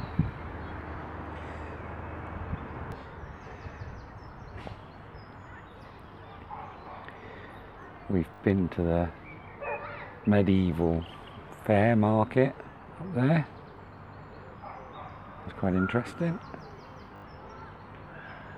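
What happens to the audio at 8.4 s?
A repeated buffer from 8.34 to 8.4 s: late data made the device replay a roughly 20 ms block three extra times, heard as a brief stutter with hard joins.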